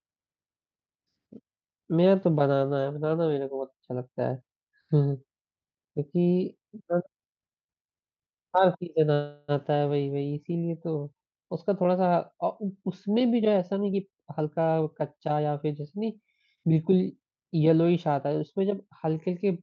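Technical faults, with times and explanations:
9.13 to 9.51 s, call audio freeze: the speech stops advancing for about 350 ms. The last sound is stretched into a fading buzz or hiss instead of silence. Packets were likely held up and the jitter buffer ran empty. The speech then resumes where it stopped, with nothing lost and 350 ms more delay.
13.4 to 15.49 s, jitter buffer speed-up: the speech runs at about 116% speed and sounds hurried, but the pitch stays the same. The buffer was holding more audio than it aims for. To catch up, it cut short pitch-period pieces, roughly 400 ms in total.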